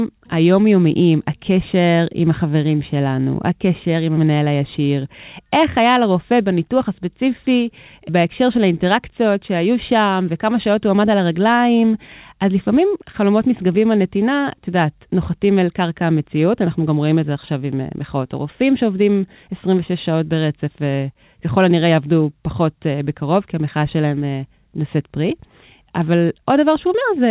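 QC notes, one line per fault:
No faults were found in this speech clip. It came through a WebRTC call path in working order, and the audio stops at 4 kHz, a narrow telephone-band sound that fits G.711 mu-law at 64 kbps.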